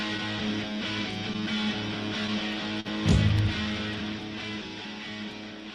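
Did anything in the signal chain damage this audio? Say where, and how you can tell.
Yes. At the network and jitter buffer, clock drift between sender and receiver: the sender's clock runs about 2 percent slow, so the receiver keeps repeating short pieces, causing uneven timing hiccups throughout.

Also in the network path, a short stall from a late packet at 2.80 to 2.87 s: the buffer ran empty, so the last sound is held about 46 ms, with nothing lost.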